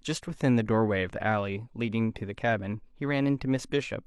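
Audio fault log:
No audible faults anywhere in this speech recording.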